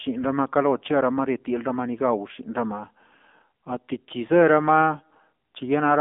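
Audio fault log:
Throughout, AMR narrowband mobile codec: a low-rate AMR-NB encoder, consistent with its 7.4 kbps mode, rebuilt the speech from a vocal-tract model and sparse pulses. The band runs 200 Hz to 3.6 kHz, nothing above 3.7 kHz survives, and the speech sounds plainly buzzy and synthetic.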